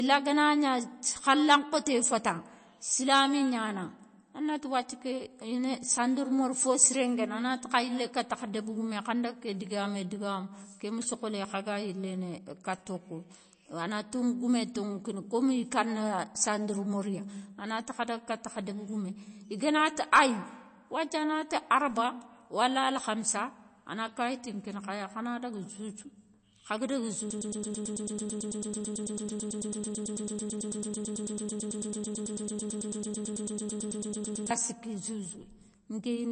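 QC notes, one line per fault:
throughout: MP3 compression. The speech is watery and swirly, with chirpy metallic edges on s sounds, smeared consonant onsets and nothing above 8.3 kHz. This is likely a low-bitrate MP3 encode, around 32 kbps, where the encoder ran short of bits, cut the treble at a fixed point and zeroed weaker frequency lines that flicker on and off between frames. Unlike a plain low-pass filter, which only dulls the sound, the warbling texture that moves from frame to frame marks this as codec damage.
27.31–34.51 s: broken-record loop. Right after "khaga daga", a fragment of about 110 ms repeats exactly, back to back, some 65 times over roughly 7 seconds, and the speech that belonged in that stretch is gone. The likely cause is that the stream or player stalled and kept resending the last piece it held. Unlike an echo or delay, the repeats do not fade and nothing new gets through. 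Unlike a stutter or dropout, the identical piece repeats in a steady, mechanical rhythm.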